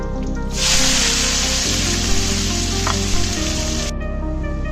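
No dropouts, glitches, distortion or timing errors are audible anywhere in the clip.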